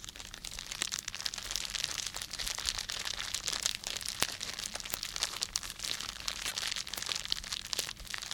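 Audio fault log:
1.46, 4.23, 4.94, 6.98 and 7.87 s: bit error spike. A flipped bit throws one or a few samples far off and back, giving a sharp broadband tick unrelated to the sound.
6.47 to 6.51 s: damaged data in a compressed stream. Corrupt frames are misread while the decoder loses sync and hunts for the next header, producing a brief chirp or blip lasting about 44 ms.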